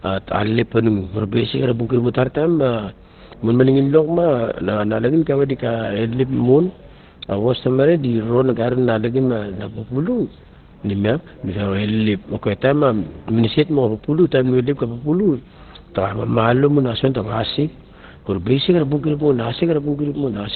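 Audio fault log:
Throughout, Opus compression: the speech sounds muffled and hoarse for the whole clip, with nothing at all above about 4.3 kHz. The damage is heavy. The likely cause is Opus dropping into its SILK speech mode at a very low rate, something around 12 kbps. At that rate it narrows the band to a telephone-like slice, throws away the upper range entirely, and models the voice coarsely, which leaves it dull and rough.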